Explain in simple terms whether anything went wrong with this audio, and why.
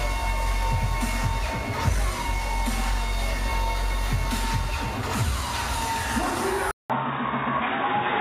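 At 6.71 s the audio drops out for about 0.19 s, then returns duller and boxier until the end, with nothing above 3.8 kHz and a new, quiet background noise. Loudness stays about the same. This is likely an input switched to a poorer device.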